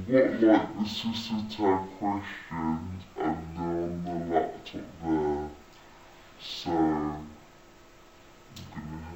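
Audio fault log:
Throughout, stereo read as mono. The sound plays at half speed, 0.5 times normal, and sits an octave low, 12 semitones down. Left and right samples arrive interleaved, but they are taken one after another as a single channel. Each stereo pair becomes two consecutive samples, so the playback takes twice as long and every frequency halves. The alternation between channels also folds a fainter mirror image into the upper half of the spectrum.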